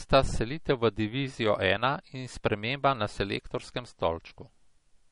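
From start to finish the speech has nothing above 10.6 kHz, and the top end has that dull, swirly MP3 texture. That points to low-bitrate audio saved at a high bitrate. The cut-off and smearing fit an MP3 squeezed down to around 40 kbit/s, which was likely then re-encoded at something generous like 256 kbit/s. The bigger file can't bring back what the first pass threw away, so the missing air and the artefacts carry straight through.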